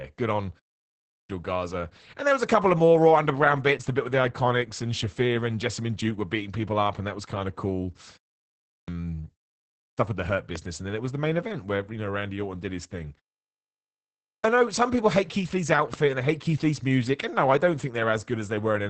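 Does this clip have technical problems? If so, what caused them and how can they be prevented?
Yes. Throughout, the speech sounds muffled, hoarse and slightly robotic, with nothing above 8.5 kHz. That is heavy Opus voice compression: the SILK linear-prediction coder is coding the excitation coarsely, consistent with a bitrate around 10 kbps in wideband mode. Raising the bitrate, or allowing a higher-bandwidth mode, would prevent it.

At 0.88 s after "good on", 8.46 s after "was kind of cool", 9.57 s, and 14.05 s just before "I know some people", speech begins abruptly with roughly 0.4 s swallowed each time. This is a clipped start after a pause: the output device sleeps during the preceding silences of 0.3 to 0.9 s and needs time to wake. Keeping the device active through silences would prevent this.

Two sharp loud pops, at 10.56 s and 15.94 s, each stand roughly 10 dB above the speech, which carries on underneath. 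They are likely from a sudden voltage step such as a plug, switch, static discharge or driver glitch. Securing connections and updating audio drivers would help prevent them.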